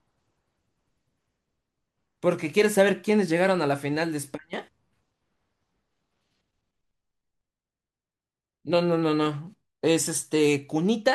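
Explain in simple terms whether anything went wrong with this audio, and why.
Listening carefully, nothing in this recording stood out as having gone wrong.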